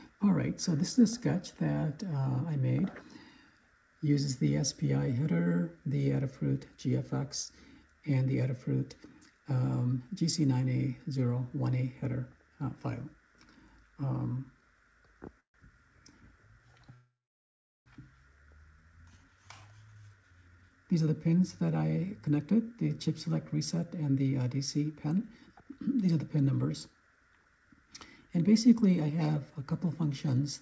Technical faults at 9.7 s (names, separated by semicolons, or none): none